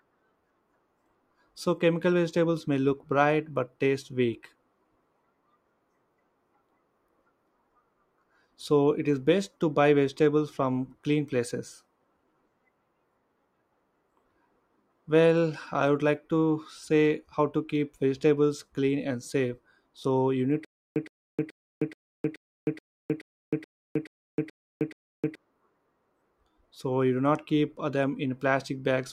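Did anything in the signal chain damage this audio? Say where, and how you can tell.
Yes. From 20.65 to 25.35 s, right after "you need", the audio falls into a stutter with silent gaps: a 116 ms fragment repeats 11 times, each followed by 312 ms of dead silence, a steady 428 ms cycle. This is likely a playback or stream stall, with each retry replaying the last buffered fragment before running dry. The waveform shows identical short blocks separated by flat silent gaps, and the spectrogram shows matching vertical slices alternating with blank columns.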